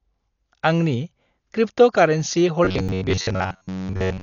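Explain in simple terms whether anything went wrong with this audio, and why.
Dolby Digital compression, heard throughout the clip, is the likely cause of the dull, muffled tone. Nothing above 6.9 kHz is left, and the encoder was squeezed hard enough that missing detail got filled in with a rough, fluttering hiss around the speech.

Robotic sound from repeated short buffers runs from 2.65 s to the end at 4.23 s. Fresh audio likely stopped arriving fast enough, so most of it was replaced by tiny repeated snippets about 11 ms long. That forces a steady metallic buzz near 94 Hz onto the voice.

A CD skip occurs at 2.88 s. Something made the disc player's laser jump to a different spot. You hear a very brief silence, and then the speech picks up from another place instead of continuing smoothly.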